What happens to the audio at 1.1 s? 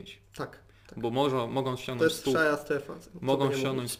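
At 1.1 s the audio carries crude rate conversion, present throughout the clip rather than starting there. The pattern fits a change from 44.1 kHz to 48 kHz done by nearest-sample picking, so samples are repeated on an irregular but periodic schedule with no filtering. That timing error produces inharmonic tones roughly 25 dB below the signal, heard as a gritty fizz that rides on louder and brighter moments.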